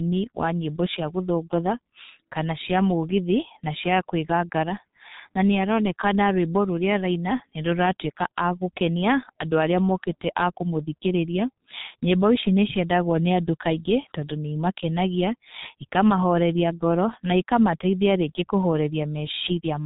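From start to finish the speech passes through the G.723.1 codec under heavy strain: nothing reaches above 3.8 kHz, and the slowly updated voice model leaves it muffled, hoarse and smeared at consonants, which fits a rate near 6.3 kbit/s. Unlike simple low-pass filtering, the hoarseness shows the damage comes from coding.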